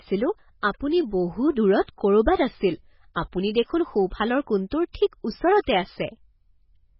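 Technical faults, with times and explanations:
Throughout: MP3 compression. The speech is heavily mangled, with nothing at all above 5.5 kHz and a watery, swirly texture on top. That's most likely an MP3 encoder starved of bits, which fits a rate around 16 kbps. With so little to spend, it chops the treble off at a fixed point and drops the weaker frequency lines, and the ones left flicker in and out frame to frame.
3.14 s: pre-echo. There's a brief hiss, about 15 ms long, sitting just ahead of a sharp onset, and the attack itself comes across softened. The codec smears its quantisation noise evenly across a whole transform block. With the attack landing late in that block, noise scaled for the loud part spills into the quiet moment before it, so you hear the hiss arrive early.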